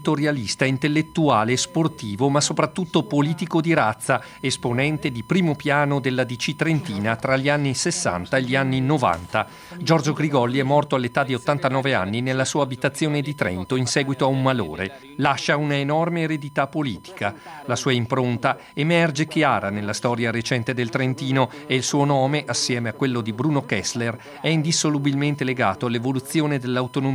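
A fixed-pitch whine at 1 kHz runs under the audio for the whole clip, sitting about 30 dB below the signal. This is USB whine: current drawn in the bus's 1 ms frames leaks into the audio path through shared power or ground.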